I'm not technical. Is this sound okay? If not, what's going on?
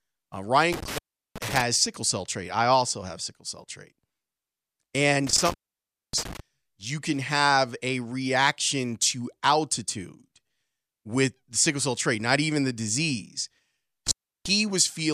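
No. The speech has an intermittent contact fault, a loose plug or cable briefly losing connection, at 0.73–1.61 s before "sickle cell trait I", 5.27–6.40 s before "you can have a", and 14.07–14.49 s after "not even the disease". Each cut lasts about a third to six-tenths of a second. Crackles at the edges and faint hiss during the gap set it apart from a clean digital dropout.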